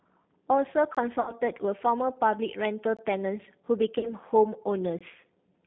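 Throughout, the sound is narrowband, rough and slightly synthetic, confined to roughly 150 Hz to 3.6 kHz. This is G.729 codec damage, and the bandwidth and texture fit G.729A at 8 kbit/s. At 0.95 s a brief, hard-edged hole of about 20 ms cuts in. It is a gap between chunks: silence inserted at the join between 2-second blocks of audio. From 1.21 to 1.34 s the sound smears into a stretched, fading fill and stays weak afterwards. This is VoIP packet loss concealed by the speech codec: about 60 ms went missing, pointing to three lost packets, and the decoder extrapolated from its last frame. Identical chunk-gap holes recur at 2.97 s and 4.99 s, keeping the 2-second spacing. Between them, from 3.99 to 4.12 s, comes a second concealed loss of about 40 ms, likely two packets, with the same stretched, decaying fill and a sluggish recovery.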